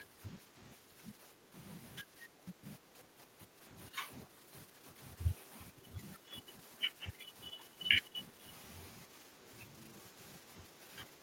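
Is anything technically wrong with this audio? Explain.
Yes. Speech suppressed in double talk runs from 0 to 1.54 s, 2.02 to 8.43 s and 9.06 to 11.23 s. The voice dips by up to about 10 dB, less in the last stretch, likely because the echo canceller ducked during crosstalk. The waveform shows sagging envelopes. The other side's voice leaks through at 9.86 to 9.91 s as a faint scrap about 20 dB below the speech, likely residual loudspeaker echo. It appears as a brief, weak smear on the spectrogram.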